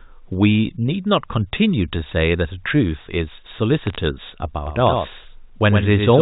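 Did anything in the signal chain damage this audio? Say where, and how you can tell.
Yes. From 3.83 to 3.96 s there are bit errors on a digital phone line: sharp isolated ticks over unchanged speech, not clipping or dropouts, from flipped sample bits at a low error rate.

From 4.67 s to the end, a doubled audio track appears: a full-band copy about 5 dB quieter, roughly a tenth of a second behind, starting abruptly and without room decay. The likely cause is a second, slower capture path or an editing slip, not echo.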